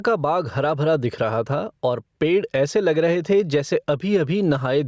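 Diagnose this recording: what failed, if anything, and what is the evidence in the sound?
Input-stage gain pumping throughout: loud and soft parts are pulled closer in level and the sound is squashed, with the gain swinging by around 10 dB, likely excess gain hitting a fast limiter.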